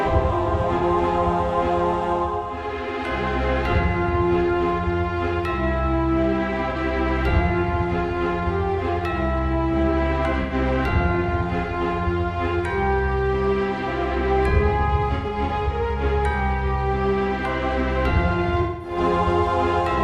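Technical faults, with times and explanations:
0.78–0.84 s, 6.71–6.76 s, 10.42–10.53 s, 15.15–15.51 s, 18.61–18.97 s: AAC frame loss with concealment. Gaps of about 43, 43, 85, 171 and 213 ms were filled from the last good spectrum. That makes smeared, phasey patches. The 15.2 s losses are scattered, with the longest run about 100 ms.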